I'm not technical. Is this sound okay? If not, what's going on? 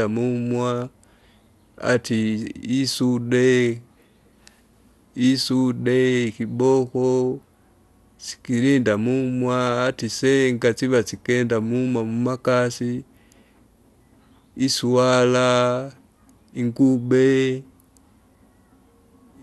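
No. The recording was likely squeezed with MP2 compression, an older method that splits the sound into many narrow slices and saves space by dropping or roughly storing the ones it can't afford. Here that happens from start to finish. Nothing survives above about 12.1 kHz, so the speech sounds dull and muffled, and the roughly stored parts leave a plainly audible gurgling, grainy edge, like low-quality digital radio.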